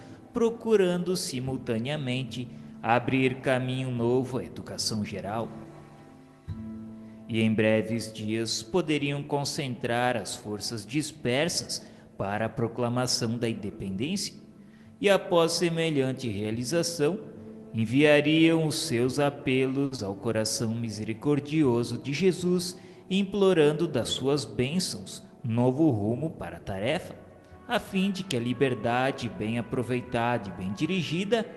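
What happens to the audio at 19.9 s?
A short stall from a late packet runs from 19.85 to 19.93 s. A packet arrived late, the jitter buffer ran dry, and the receiver held the last sound for about 60 ms until it came, so nothing is lost. The playback then continues about 60 ms later than before, and you hear a brief drawn-out, faintly buzzy moment.

Right after, from 19.95 to 20.00 s, there is a short concealed packet loss. About 40 ms of audio never reached the decoder in time. The receiver covered the gap by extending the preceding sound for roughly 30 ms and then blending back into the real signal, which leaves a quick smear or wobble where a brief sound can drop out.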